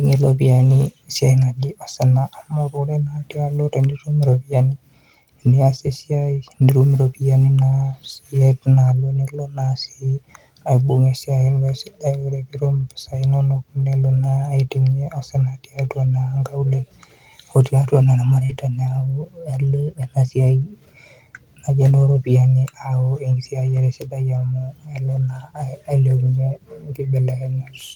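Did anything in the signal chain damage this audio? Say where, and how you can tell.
Yes, the network stage. At 18.45 to 18.51 s about 40 ms of audio arrived too late to decode, and the receiver produced short concealed packet loss, extending the preceding sound for 38 ms before blending back. You hear a brief smear or wobble there.

Also network-stage: a lost packet rebuilt from error correction at 18.49 to 18.55 s, 20.61 to 20.63 s and 23.67 to 23.77 s. Low-bitrate backup copies filled 40, 20 and 60 ms, consistent with two, one and three lost packets, so nothing drops out, but those moments sound rougher and grainier.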